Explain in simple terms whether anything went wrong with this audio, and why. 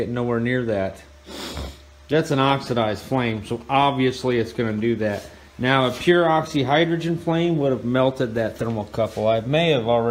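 From 2.2 to 5.2 seconds there's GSM signalling bursts: a nearby mobile phone's radio pulses leak into the circuit as a galloping ticking buzz.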